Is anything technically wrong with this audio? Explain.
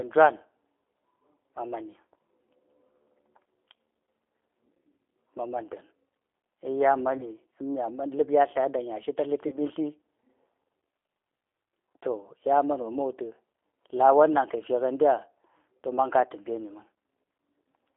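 Yes. The whole clip has the rough, slightly synthetic, narrow sound of a G.729 codec. The speech is intelligible but grainy. Nothing comes through below about 300 Hz or above 3.5 kHz, which fits an 8 kbit/s telephone-grade link. The codec doesn't store the waveform itself. It keeps a vocal tract filter, a pitch predictor and a handful of pulses for each 10 ms frame, so fine detail is replaced by an approximation, and that is clearly audible here.

There are three short dropouts covered by VoIP packet loss concealment in the speech codec. They occur at 7.18 to 7.25 s, at 9.48 to 9.58 s, and at 12.82 to 12.90 s, just after "to ya man". Each sounds like a brief buzzy smear or fading tone where the speech should be, followed by a weak, distorted recovery. The first and third fit a single lost packet of about 20 ms, and the middle one fits two packets, about 40 ms. The decoder fills each gap by repeating its last pitch and filter at falling gain. 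Because every frame builds on the previous one, the damage carries on past the gap itself.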